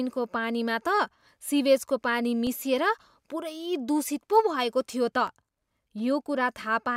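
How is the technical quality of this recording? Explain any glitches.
The recording has two brief glitches, both the same kind: a block of digital silence, at 2.47 s and again at 5.27 s in the speech. Each time the audio drops to silence for about 2.7 ms and then resumes, with no fade at either edge, so it comes across as a single sharp tick. Both holes are the same length, which fits a 128-sample buffer that the program failed to fill in time. A codec dropout or concealed packet loss would sound smeared or muffled instead of cleanly empty.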